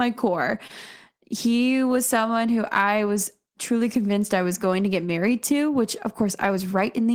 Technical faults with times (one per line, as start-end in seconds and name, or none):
0.67-0.73 short stall from a late packet